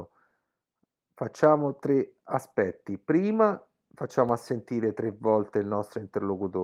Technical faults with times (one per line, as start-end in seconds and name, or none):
4.29-6.63 DC step